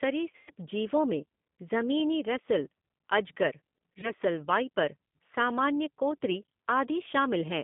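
Throughout, the speech carries the G.729 codec's rough, slightly synthetic texture, which fits an 8 kbit/s G.729A stream. The line passes only 150 Hz to 3.6 kHz, so a spectrogram shows an empty band above, with smeared harmonics.

From 0.32 to 0.50 s, VoIP packet loss concealed by the speech codec replaces about 120 ms scattered over 160 ms, with one 100 ms gap, by a fading extrapolation with a decaying envelope. At 4.01 s, between "में जमीनी रसेल अजगर" and "वाइपर सामान्य कोतरी", a 20 ms loss briefly weakens and roughens the sound.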